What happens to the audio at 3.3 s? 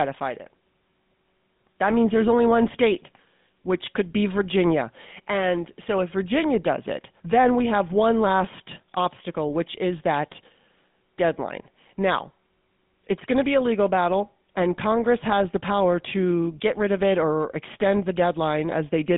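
At 3.3 s the speech carries GSM full-rate codec damage, present throughout. Pulse-driven vocal-tract coding in a 150 Hz to 3.6 kHz band leaves it plainly buzzy and gravelly.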